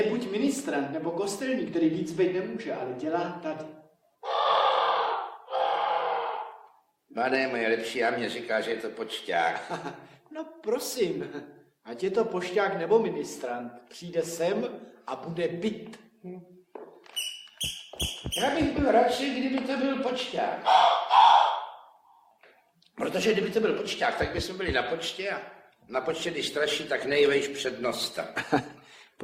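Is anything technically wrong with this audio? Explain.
Yes. From 25.53 s to the end at 29.23 s, the audio switches abruptly to an adaptive stream at a lower bitrate, with no gap. When the connection slows, the player fetches a leaner encoding, and the sound points to a step from about 64 down to 24 kbit/s Opus. Codec artefacts rise, with added codec smearing. On a spectrogram, the texture changes abruptly at 25.53 s while the waveform continues unbroken.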